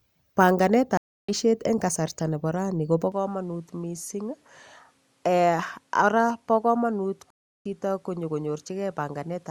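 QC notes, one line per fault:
0.97–1.31 s and 7.30–7.66 s, stream reconnect: the audio drops out for about 310 ms, then 350 ms, and resumes at a later point, roughly 0.3 s and 0.2 s on, so material is skipped rather than repeated; the first resumes just before "eng' kasarta nebo raini". A fresh decoder restarts mid-stream, which separates it from a plain dropout.
3.12 s to end, input switched to a poorer device: right after "kasarta nebo raini kobo" the sound turns duller with nothing above 13 kHz, drops about 5 dB and gains a new noise floor around 40 dB below the speech, with no gap at the switch. A likely change to a narrower microphone; unlike a codec change, the tone and background shift together and stay.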